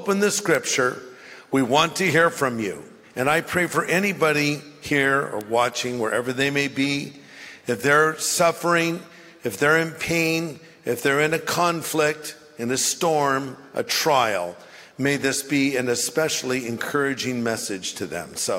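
Bit error spikes at 0.55 s and 5.41 s: a single flipped bit in one or two stored or transmitted samples makes the value leap by a power of two to about -9 dBFS and snap straight back. Each is heard as one sharp, broadband tick unrelated to the surrounding sound.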